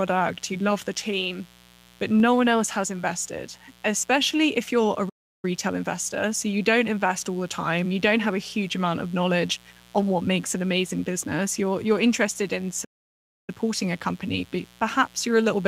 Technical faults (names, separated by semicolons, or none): mains buzz; playback stall